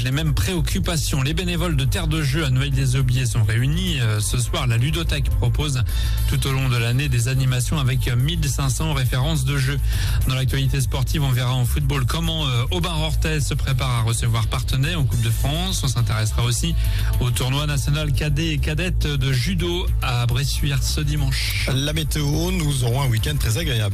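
No technical faults can be heard anywhere in this audio.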